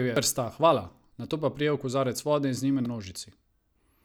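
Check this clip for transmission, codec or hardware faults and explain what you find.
Two brief faults from damaged data in a compressed stream, at 0.16 s and 2.86 s in this speech. Corrupted bytes in the encoded stream made the decoder misread the affected frames and lose sync until it found a valid header, producing a short chirp or blip each time.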